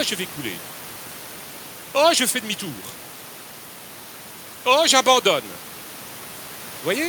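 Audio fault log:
No faults are present in this speech recording, where the only other sound is room noise sitting about 21 dB below the speech.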